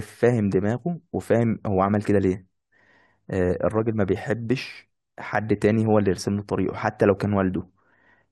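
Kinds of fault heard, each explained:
No audible faults detected.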